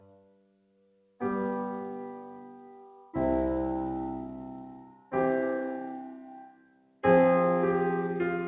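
Throughout the music the level pumps and thins, with held notes and tails sinking while attacks push through, a swing of around 20 dB. This is a noise suppressor applied to music: a speech-tuned suppressor mistakes steady tones and reverb for noise and turns them down.

The sound is cut by the noise suppressor three times. From 0.0 to 1.21 s the sustained material drops by about 18 dB. From 4.73 to 5.13 s it drops by about 13 dB, and from 6.16 to 7.04 s by about 18 dB again. In each span the suppressor treated the steady or decaying sound as noise and pulled it down harder than the rest. The call's G.711 codec caps everything at 4 kHz, which is normal for that path.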